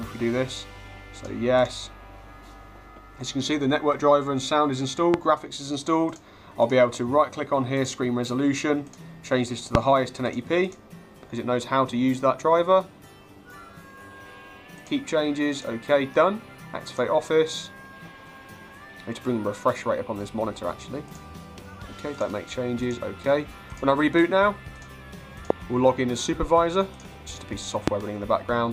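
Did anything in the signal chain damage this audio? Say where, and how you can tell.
Yes, there are four loud pops: at 5.14–5.16 s, 9.75–9.77 s, 25.50–25.53 s and 27.88–27.90 s. Each is a single sharp hit, around 20 dB above the surrounding audio and lasting only about 20 ms, with the sound carrying on underneath. That points to the analogue wiring stage, most likely a brief voltage spike from a loose plug, a switch or a static discharge being added straight into the signal.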